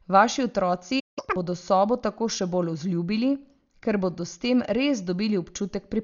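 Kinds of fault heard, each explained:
Dolby Digital compression: Heavy coding damage, with nothing above 6.9 kHz and rough, fluttering dither noise around tones, likely from AC-3 coding at a bitrate near 48 kbps.
Playback stall: The speech cuts out mid-flow from 0.99 to 1.19 s, about 173 ms of silence, likely because the player ran out of data.
Catch-up at higher speed: From 1.19 to 1.36 s the player runs its backlog at 2.0x speed, pitch up roughly ten semitones, just before "bodo sobo tako še".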